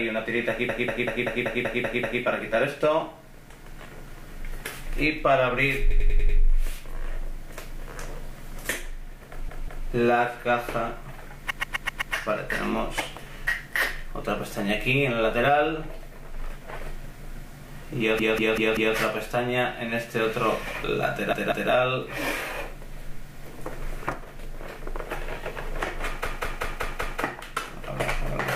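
The audio stutters with repeated frames at 0.69–2.22, 5.90–6.38, 9.49–9.87, 11.50–12.14, 18.19–18.96, 21.33–21.71 and 26.26–27.22 s, where a block of 96 to 192 ms loops several times. Compressed frames were written or sent more than once, adding about 5.2 s in total.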